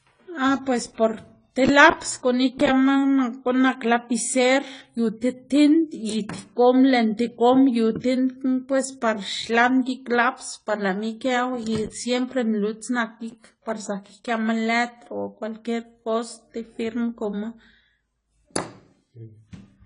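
Speech runs through the whole clip with plainly audible codec damage: it sounds dull and smeared, with a swirling, fizzy texture on sustained sounds and sibilants, and nothing is present above about 10.1 kHz. The likely cause is AAC compression, AAC-LC at a low rate that fits about 24 kbps. At that rate the encoder quantises each frame's frequency lines coarsely and drops everything above the cut-off to save bits, so fine detail is lost and smeared.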